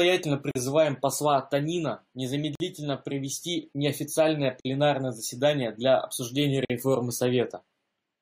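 Short holes of silence cut into the speech at 0.51, 2.55, 4.60 and 6.65 s, about 42 ms for the first and 48 ms for the rest, recurring every 2 s. These are gaps at joins of encoded pieces: separately encoded segments were spliced untrimmed, leaving encoder delay and end padding in.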